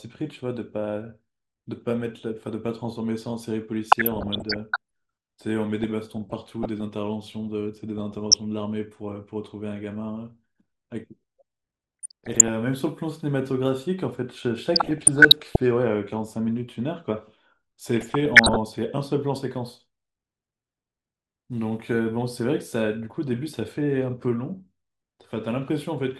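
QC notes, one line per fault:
Throughout, MP2 compression: the speech sounds dull and plainly gurgling, with a granular roughness. This is likely the sound of MPEG Layer II coding at a low rate, consistent with about 80 kbps. Starved of bits, the encoder shuts off upper sub-bands and quantises the rest coarsely. On a spectrogram the top end stops at a ragged ceiling, with high bands blinking on and off in blocks from frame to frame.
3.89–4.76 s, 5.83–6.81 s, 7.98–8.34 s, 12.03–12.48 s, 14.75–15.56 s, 17.97–18.56 s, DAB burbling: six bursts of burbling sit over the speech. Bit errors have slipped through error correction into the MP2 data, so corrupted samples put short blips of noise into single sub-bands and corrupted scale factors make sub-bands leap in level for up to a frame. On a spectrogram these show as isolated bright horizontal bars in single bands. The waveform shows brief lumpy bulges in the envelope.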